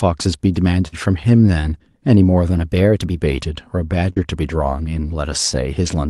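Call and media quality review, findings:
Burst of packet loss, 0.87–0.95 s: roughly 48 ms of sound continued from the last frame and faded down, then a jump past about 40 ms of missing audio. Jitter buffer/concealment. Spectrogram: flat, smeared harmonics decaying, then a hard edge where real audio resumes.

Pitch and tempo lift, 2.52–3.19 s: speech runs about 5.3% fast and sits roughly 89 cents sharp, then snaps back. Likely a drift correction step by clock-sync resampling. Spectrogram: harmonic stack shifted upward across the span, vertical discontinuities at both ends.

Short concealed packet loss, 4.13–4.19 s: brief smear where about 36 ms of synthesized continuation covers roughly 40 ms never decoded, then blends back. Concealment in the decoder. Spectrogram: blurred column, no gap, under the Opus-style band edge near 12 kHz.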